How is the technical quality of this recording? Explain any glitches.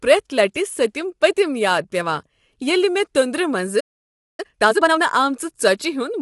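The recording has three audible problems: codec damage across the whole clip, a dropout just before the four-second mark, and a rushed passage right after it.

Low-delay AAC compression, throughout: the speech sounds rough and grainy, with a hiss filling the gaps between harmonics and a lowered top band. This is likely AAC-ELD, the low-delay codec used in video calls, at a rate that fits around 32 kbps. At this low bitrate too few bits remain to keep the voice clean, and the top band is lowered.

Playback stall, 3.80 to 4.40 s: the speech stops abruptly mid-flow and the output falls silent for roughly 0.6 s. The likely cause is the player running out of buffered data, or its playback thread being briefly blocked, so nothing reached the output until it recovered.

Time-compressed catch-up, 4.40 to 4.98 s: right after the silence, the speech races at 2.0 times normal speed while keeping its normal pitch. 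Having fallen behind, the player works off its backlog by cutting out small slices of audio and cross-fading the remaining pieces together. The hurried delivery comes from the shortened timing.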